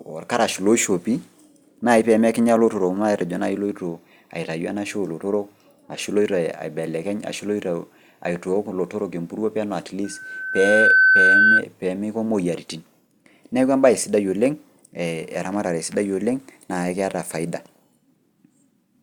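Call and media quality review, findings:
Loudspeaker feedback squeal, 10.04–11.63 s, after "empuruo peno", gone by "peemeiko moyaritin". Single 1.5 kHz tone swells over roughly a second, peaking well above the speech, about 10 dB. Mic re-captures its own loudspeaker output. Loop gain exceeds unity at 1.5 kHz.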